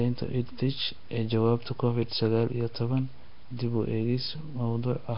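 Speech throughout with a hissy halo, smeared underwater tone and nothing above 5.3 kHz, likely Nellymoser compression; noise-filled bands, not warbling tones, set it apart.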